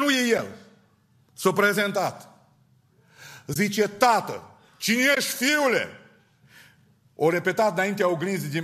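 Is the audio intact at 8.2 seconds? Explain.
Yes, the speech at 8.2 seconds is intact, with no dropout, click or distortion at that moment.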